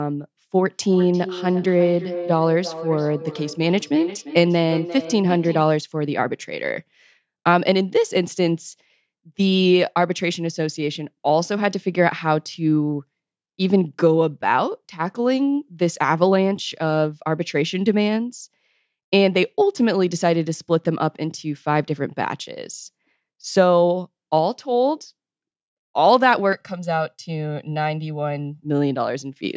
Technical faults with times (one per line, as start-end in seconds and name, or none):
0.54-5.72 feedback echo between two devices
26.53-28.62 channel delay (comb filtering)